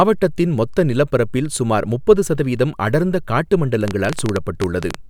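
From 3.88 to 4.96 s a train of clicks, likely interference, pops unevenly at 12.2 per second; near-identical repeated pulses set it apart from crackle.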